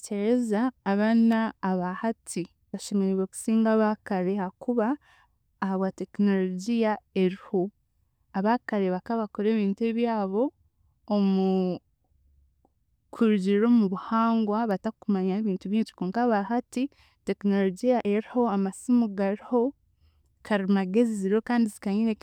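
Speech with two sharp, isolated snaps sitting on top of the sound at 1.32 s and 14.71 s, the first around -25 dBFS and the second quieter, near -30 dBFS. These electrical switching spikes are likely arcs from a nearby switch or motor coupling into the audio line.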